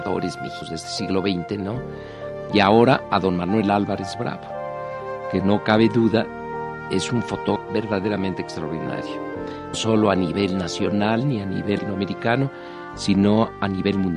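At 0.61 s, damaged data in a compressed stream makes the decoder lose frame sync and resync, giving a brief glitch. Periodic USB or driver dropouts follow from 0.98 s to 3.97 s, about four in all, one per second. Each drops well under a millisecond of audio, heard as a regular tick. The stream damage recurs as short blips at 7.55, 9.73 and 11.77 s.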